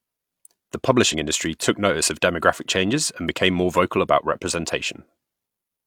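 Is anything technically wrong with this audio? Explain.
Yes. From 1.09 to 1.14 s, damaged data in the compressed stream makes the decoder misread frames and lose sync, producing a brief glitch in the speech.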